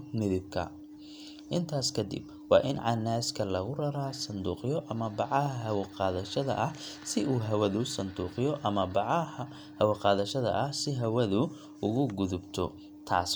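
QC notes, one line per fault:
No faults detected on review of the speech recording.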